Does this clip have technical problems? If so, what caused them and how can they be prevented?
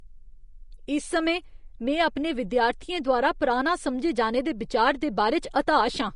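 Yes. The speech appears to have gone through low-bitrate Vorbis compression for its whole length, likely at a setting that fits something around 35 kbps. At that rate the encoder spends too few bits on the residue above its spectral floor, so treble detail turns into grainy noise of similar energy, consonants sound hissy and attacks blur, and nothing survives above about 10.5 kHz. Encoding at a higher quality setting, or keeping an uncompressed master, would prevent this.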